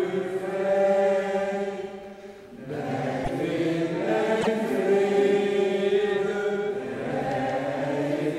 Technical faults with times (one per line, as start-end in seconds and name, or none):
3.23-3.30 broken MP3 bit reservoir
4.40-4.47 broken MP3 bit reservoir